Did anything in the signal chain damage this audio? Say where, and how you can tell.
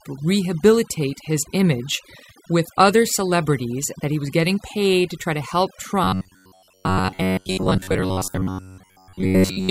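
Yes. Overdone noise removal in call processing runs throughout. The background drops into near-silent, twinkling specks, unlike codec smearing, which blurs rather than gates.

From 6.04 s to 9.70 s, a rigid metallic buzz at 93.8 Hz sounds. This is likely robotic sound from repeated short buffers, roughly 10.7 ms each, at the driver or buffer stage, with most real audio skipped.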